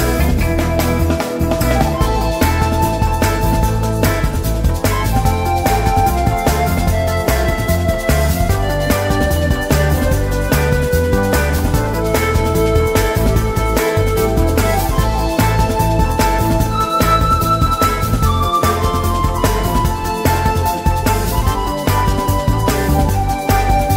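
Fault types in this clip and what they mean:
Nothing here stands out as a technical problem; the audio runs along steadily with no glitches, dropouts or odd artefacts to point to.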